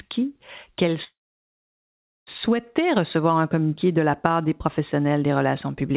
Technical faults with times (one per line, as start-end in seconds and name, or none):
1.04-2.29 call audio freeze